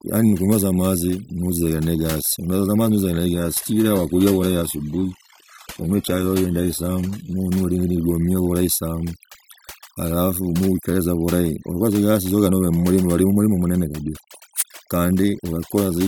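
From start to finish the speech carries overdone noise removal. A suppressor set too hard cuts individual frequency bands whenever they sit near its noise estimate, leaving a near-silent background flecked with twinkling specks. Unlike a plain low-pass filter, the loss shifts moment to moment.

From 3.34 to 7.34 s the clip switches to an adaptive stream at a lower bitrate, with no gap at either edge. Content above about 14.9 kHz disappears, which suggests a move from a 96 kbit/s AAC stream to roughly 20 kbit/s HE-AAC. Full quality returns abruptly just before "olile ligomia bulahi sana". The fixed, sudden start and end set it apart from the constant noise-removal damage.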